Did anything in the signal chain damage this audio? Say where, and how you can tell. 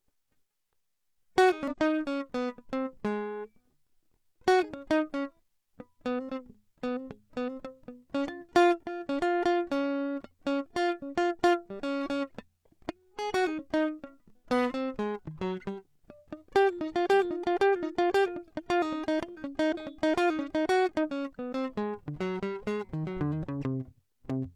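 Yes. Compressed frames were skipped at 1.68–1.76 s, 19.69–19.74 s and 20.99–21.05 s. Each time the music lurches ahead by about a tenth of a second. At the codec stage, whole frames went missing or were rejected as damaged.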